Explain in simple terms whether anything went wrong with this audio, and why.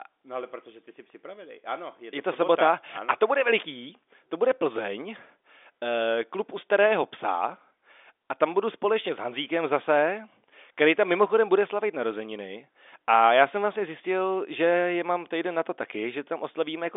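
Nothing went wrong here.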